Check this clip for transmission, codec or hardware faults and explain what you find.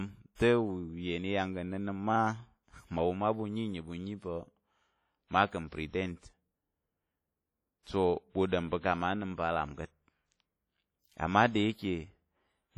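Two codec-related faults run through the speech.

Throughout the clip, the sound is ringing and washy, with a hiss that swells and fades with the speech. This is likely WMA compression at a low rate, around 32 kbps. Long transform blocks smear quantisation noise over tens of milliseconds and strip weak components. Unlike broadband background noise, this hiss follows the signal's level.

Pre-echo occurs at 0.35–0.40 s, spreading about 44 ms, and at 7.83–7.87 s, about 38 ms. A sharp onset late in a transform block leaves the block's noise, sized for the loud part, to fill the quiet just before it. A brief hiss runs ahead of each attack and softens it. Unlike a click or dropout, the hiss comes before the attack, not after it.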